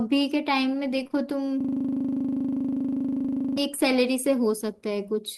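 It's a speech recording with two separate problems. Just after the one-second mark there's short concealed packet loss, three back-to-back gaps starting at 1.03, 1.07 and 1.12 s. Each lost about 20 ms that the decoder papered over by extending the preceding sound, so you get a quick smeary wobble until about 1.15 s. Then from 1.61 to 3.58 s there's a system hang loop. The machine stalled while the audio hardware kept replaying the same 40 ms of buffer, 49 times over, which comes across as a gritty 25 Hz buzzing stutter for nearly two seconds.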